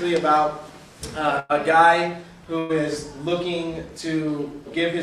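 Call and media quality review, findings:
Burst of packet loss, 1.39–1.54 s: about 98 ms of concealment fill, last sound held and fading out, then playback resumes past about 60 ms of missing audio. Fill ran longer than the loss, so playout delay grows by about 38 ms. Receiver-side concealment.

Second burst of packet loss, 2.59–2.74 s: same pattern, about 105 ms filled, about 60 ms missing, delay up by about 45 ms. Worth a look at the network path feeding the receiver.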